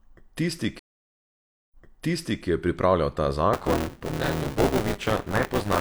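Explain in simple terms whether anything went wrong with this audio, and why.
Stream reconnect, from 0.79 to 2.46 s: the connection dropped, leaving almost a second of silence. When playback restarted, it jumped back about 0.74 s, so a stretch of speech repeats just before "ki je pripravljal ta".

Buffer tearing, from 3.53 s to the end: the part of the system writing the audio and the part playing it fell out of step. Each short chunk then holds roughly a third of old sound from about 20 ms before, causing a robotic 200 Hz buzz.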